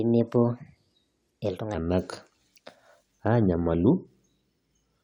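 From the start to 1.74 s, the section at the wrong speed was likely played back against a faster clock than the one it was recorded with, so the samples run out 1.26 times too quickly. Pitch and tempo rise together: the voice sits about four semitones high and the speech sounds hurried. At 1.74 s it drops abruptly to its natural pitch and pace.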